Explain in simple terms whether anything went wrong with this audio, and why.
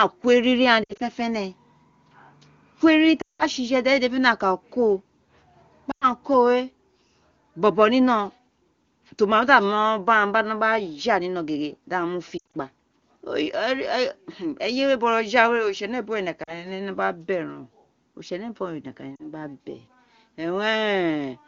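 Lost AMR speech frames at 0.83, 3.21 (right after "ko eriri"), 5.91, 12.37, 16.44 and 19.16 s. Radio errors spoiled bits of the call, so the phone stretched the last good sound and let it fade. You hear brief warbles or dips, and in the longer gaps the voice drops to near silence.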